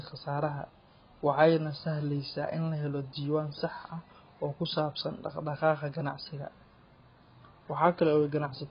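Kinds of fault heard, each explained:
AAC compression: the speech sounds dull and warbly, with nothing above 5.1 kHz and smeared sibilants, likely from heavy AAC-LC coding around 16 kbps rather than a clean low-pass filter.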